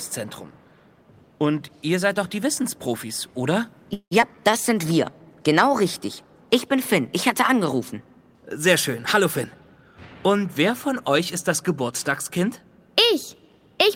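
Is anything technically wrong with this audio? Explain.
Yes, there are four problems with delivery timing.

Call audio freeze, 3.93 to 4.13 s: packets were likely held up in transit, draining the jitter buffer. The receiver stretched the last sound into a fading fill for about 0.2 s, the final 80 ms going silent, before the audio resumed where it stopped.

Skip ahead, 4.21 to 4.24 s: with later packets already queued, a stretch of roughly a tenth of a second was discarded to recover the delay. Playback lurches forward, the two sides of the cut butted together with only a tiny join.

Jitter buffer slow-down, 4.35 to 5.11 s: the buffer was still short of reserve, so the receiver repeated single pitch periods and bits of pauses, adding about 101 ms. The sound plays at 88% speed without a pitch change, drawn out.

Jitter buffer speed-up, 9.04 to 10.15 s: the buffer had built up more audio than its target, so the receiver trimmed short pitch-period pieces repeatedly, roughly 0.2 s in total. 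The sound runs at 116% speed at the same pitch, noticeably rushed.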